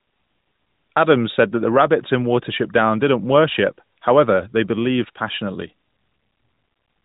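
No technical faults are audible.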